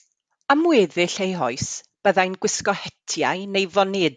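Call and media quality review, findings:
No audible faults found.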